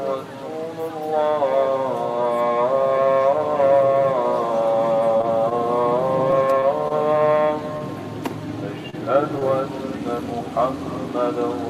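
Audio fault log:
5.17 to 7.82 s, scattered short gaps: about seven brief packet losses, none longer than about 20 ms, totalling 80 ms of missing audio. The receiver bridged each hole by extending the preceding sound, so the stretch stays clear apart from small ticks, smears and hiccups.
8.90 to 8.95 s, short stall from a late packet: a packet arrived 28 ms late and the jitter buffer ran dry. The receiver held the last sound for 28 ms, then resumed where it left off, so nothing is lost but one sound drags briefly with a slight buzz or dip.
9.39 to 9.47 s, short concealed packet loss: 20 ms of audio never reached the decoder. The receiver synthesised 19 ms from the preceding signal and trimmed 8 ms while blending back into the real stream, giving a brief smear or wobble where a short sound can drop out.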